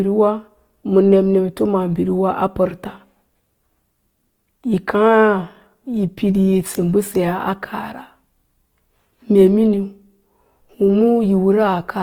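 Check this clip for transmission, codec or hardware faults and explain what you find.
One codec fault runs through the whole recording. Throughout, the speech sounds grainy and rough rather than swirly, with few spectral holes and content up to 20.3 kHz. This is likely Opus compression in CELT mode, filling starved bands with folded or noise energy, which fits a 24 kbps stream.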